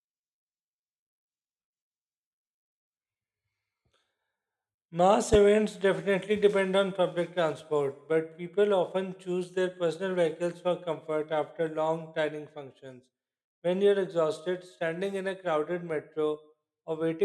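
A sudden voltage pulse, likely from a plug, switch or static discharge, enters the signal path at 5.34 to 5.37 s, just before "definitely depend on public". It is heard as a single loud pop standing well above the speech, which continues underneath.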